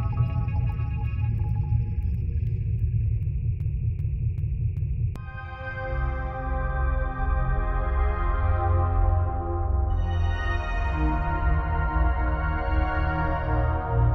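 A stalled stream likely kept resending its last fragment, causing a broken-record loop: 0.39 s of sound repeats four times from 3.60 to 5.16 s, dropping the audio due there.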